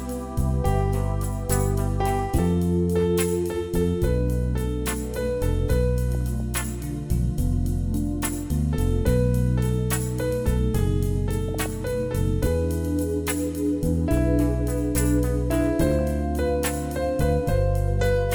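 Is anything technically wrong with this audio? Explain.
Yes. DAB burbling occurs at 6.15 to 6.40 s, 11.48 to 11.66 s, and briefly at 16.01 s. Weak reception lets bit errors, here on the order of a few tenths of a percent, slip past the error correction into the MP2 stream. Corrupted samples put short blips of noise into individual sub-bands, and corrupted scale factors make sub-bands leap in level for up to a frame. The result is burbling over the programme, longest in the first burst and just a blip in the last.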